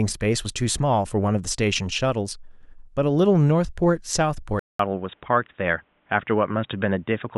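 A speech clip with a sudden change of character at 4.59 s: after a 0.2 s silence, the sound turns dull and boxy and stays that way to the end, with nothing above 3.8 kHz and a new, faint background noise roughly 45 dB below the signal. The level stays about the same. This is most likely an input switched to a poorer device, such as another microphone or a headset's narrowband call profile.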